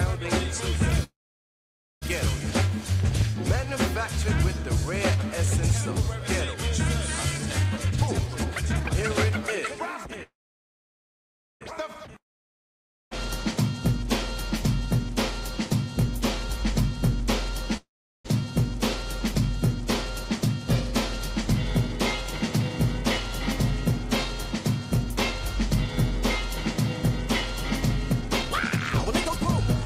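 Packets likely held up in transit drained the jitter buffer, producing call audio freezes at 1.03–2.04 s, 10.23–11.63 s and 17.77–18.27 s: a short fading buzz, then silence, before the audio resumes where it stopped with nothing missing. A jitter buffer speed-up trimmed pitch-period slices to shed excess delay, so the audio plays hurried at unchanged pitch, at 155% speed from 7.75 to 9.31 s and at 107% from 21.35 to 29.82 s. A long network dropout, likely from audio never arriving, fades into silence from 12.18 to 13.13 s, and the audio returns with roughly 0.9 s permanently lost.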